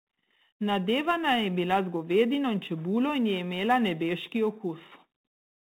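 Sample clock jitter runs through the whole recording. The converter's clock wanders by a few microseconds, so each sample is taken slightly early or late. The error this produces sits roughly 35 dB below the speech and is heard as a faint roughness that grows on loud, bright passages and disappears in pauses.

Codec payload misread occurs from 4.9 to 5.05 s. The G.726 stream, carried at 32 kbit/s with nothing above 4 kHz, has its code words read with the bit order scrambled. The decoder applies the wrong prediction differences, burying the speech in a short burst of harsh distortion until the correct ordering resumes.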